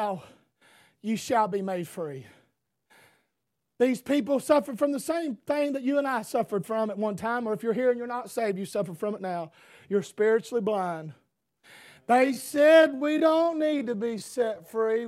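From 12.08 s to the end, the speech abruptly slows to about 0.61 times its pace while keeping its pitch, sounding dragged, likely a time-stretched section.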